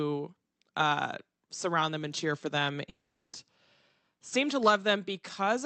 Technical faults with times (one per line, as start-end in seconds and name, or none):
2.89-3.35 long network dropout